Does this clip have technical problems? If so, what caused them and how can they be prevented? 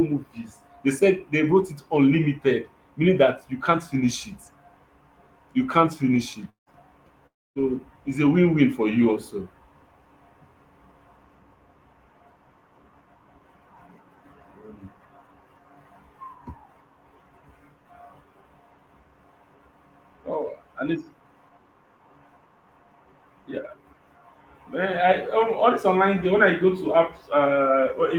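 Yes. The speech cuts out twice with a long network dropout, from 6.49 to 6.70 s and from 7.27 to 7.59 s, about 180 ms and then 300 ms of sound lost for good. Each starts as a fading buzz carried on from the last sound, then goes nearly silent for about 130 ms and 270 ms before resuming further on. That decay into silence sets it apart from brief concealed packet loss or a clean edit. The likely cause is a stall in packet delivery. A larger jitter buffer, forward error correction and a steadier connection would prevent it.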